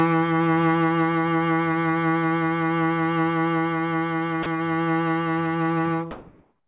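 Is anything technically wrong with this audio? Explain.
Yes. From 4.43 to 4.46 s, a 30 ms slice of the music drops into steady hiss, likely sound dropped by the voice detector. Because real musical content vanishes, not just background, this differs from plain comfort noise. From 6.11 s to the end, the quiet background, about 42 dB below the loud passages, turns flat and featureless and shifts by about 4 dB, likely comfort noise in place of the background during transmission pauses. The music is band-limited to 4 kHz by the call codec.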